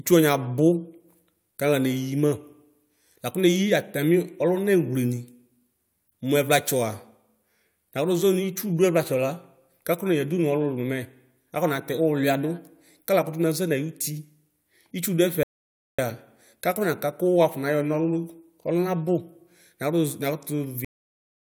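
At 15.43 s there's a rebuffering stall: the player ran dry, so the speech drops to silence for about 0.55 s and then picks up exactly where it left off. Then at 20.85 s you get a cut-off end, where the final buffers never made it out, so the speech stops mid-sound and falls straight to digital silence with no decay.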